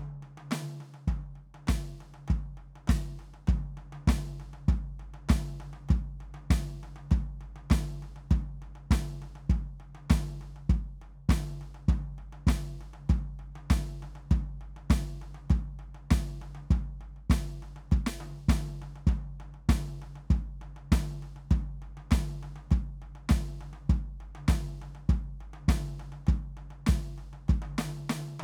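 No technical faults occur anywhere in this music, so there is nothing to describe in time order.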